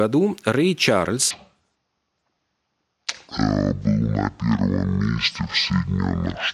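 From 1.31 s to the end, a section at the wrong speed: the speech plays at about half speed (0.506×), likely from playback against the wrong clock, so it drops roughly ten semitones and drags. Unlike a pitch shift or time-stretch, pitch and tempo fall together.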